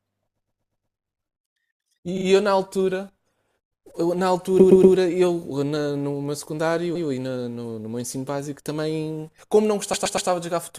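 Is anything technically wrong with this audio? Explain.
Yes. The speech has repeated frames, heard at 0.35 to 0.95 s, 2.17 to 2.25 s, 4.59 to 4.95 s, 6.95 to 7.07 s and 9.93 to 10.29 s. A short block of compressed audio is played again and again. Most blocks last 120 ms, which fits a run of six frames. The one at 2.17 s lasts 40 ms. The repeats come five, two, three, one and three extra times. Each sounds like a stutter, and each adds its repeated time to the clip.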